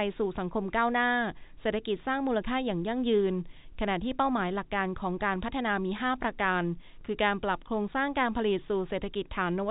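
No technical faults are audible.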